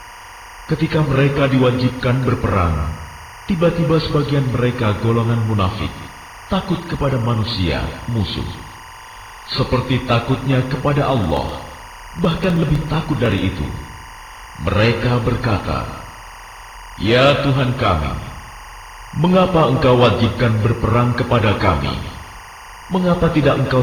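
Timecode bleed runs throughout: a chirping warble about 20 dB below the audio, running at 23.976 frames per second. A spectrogram shows flickering bands near 1 and 2 kHz.

From 11.24 to 13.38 s, periodic USB or driver dropouts skip about a millisecond of audio every 0.063 s. They sound like a regular ticking and show as evenly spaced waveform discontinuities.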